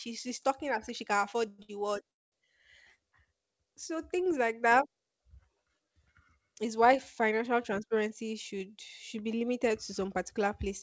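At 1.48 s the speech stops and the last sound carries on as a fading buzz for about 105 ms, then picks up exactly where it left off. That's a call audio freeze, likely delayed packets draining the jitter buffer, so time is added but nothing is lost.

Right after, at 1.62 s, there's a short stall from a late packet: one packet missed its slot, so the receiver stretched the previous sound for 62 ms until it showed up. You hear a held, slightly buzzy moment, with no audio skipped.

A second freeze starts at 2.11 s and runs to 2.34 s, 209 ms in all. This one sounds different: a brief tail of the last sound, then about 200 ms of silence before the speech resumes from the same spot.

From 7.72 to 8.11 s there's a jitter buffer speed-up. The buffer had built up extra delay, so the receiver trimmed tiny pitch-period slices over and over, around 70 ms in total. The speech runs at 114% speed at the same pitch and comes across as a bit rushed. 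Throughout, the G.722 call path leaves nothing above 8 kHz.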